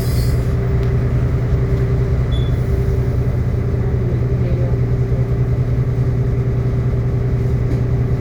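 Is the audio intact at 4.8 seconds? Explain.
Yes, the audio is intact at 4.8 seconds, with no fault to be heard at that moment.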